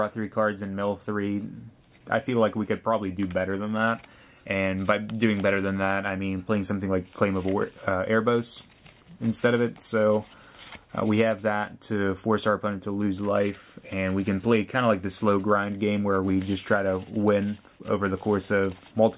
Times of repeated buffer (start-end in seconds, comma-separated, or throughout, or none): none